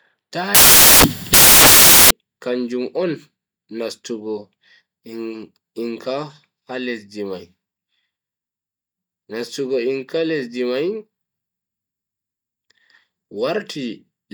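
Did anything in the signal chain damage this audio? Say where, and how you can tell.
Yes: sample-format conversion built samples from the wrong bytes, 0.55 to 2.11 s before "kanjum on". Loud broadband hiss fills the spectrogram, and the waveform turns into dense, loud noise.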